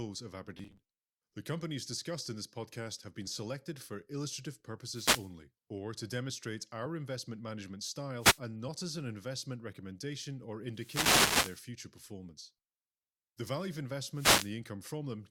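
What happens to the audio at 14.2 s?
At 14.2 s the speech is caught in a wireless microphone noise hit lasting from 14.13 to 14.55 s. The FM radio link briefly fades as reflected signals cancel at the receiver, so its noise floor surges up and sweeps across the speech as a short hiss of static. Unlike a digital wireless dropout, which cuts to silence or stutters, this fault adds a rising and falling swish of noise that smothers the sound without muting it.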